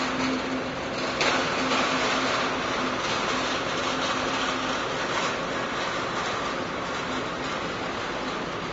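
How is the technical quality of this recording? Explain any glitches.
The technical quality is poor, with plainly audible coding damage for the whole clip. This is likely Vorbis compression at a low setting, consistent with roughly 29 kbps. The treble is quantised so coarsely that its fine detail turns into hiss-like noise. Tones sound roughened and grainy, and attacks are blurred. Unlike a simple low-pass, the top end isn't just dulled; it is replaced by noisy, textured grain.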